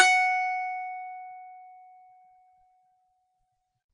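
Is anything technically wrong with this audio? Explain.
Yes. Throughout the music, the likely cause is WMA compression at a low bitrate, which fits roughly 32 kbps. Its long transform blocks smear quantisation noise over tens of milliseconds, giving plainly audible ringing, washy hiss that breathes with the music, and nothing above 9.9 kHz.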